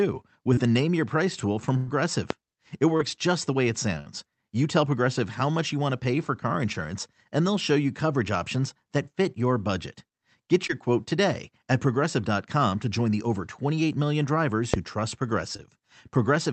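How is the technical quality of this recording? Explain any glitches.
The speech comes through a call codec that cuts everything above about 8 kHz, consistent with Opus at roughly 40 kbps. It carries three kinds of glitch.

Short concealed packet loss occurs at 0.53, 2.97, 10.67 (just before "quote today at") and 15.57 s. Each hole of about 20 to 40 ms is patched by extending the previous sound. The result is a brief smear, not an audible gap.

Bursts of packet loss occur at 1.77 to 1.89 s and 3.99 to 4.08 s. These are longer, at roughly 100 and 60 ms. The concealment holds a buzz or hiss that fades before the speech resumes further on.

Loud pops occur at 2.30 s (after "tool from") and 14.74 s (after "million drivers"). Each is a single sharp click about 20 dB above the speech, likely an electrical transient. Unlike packet loss, the speech continues intact underneath.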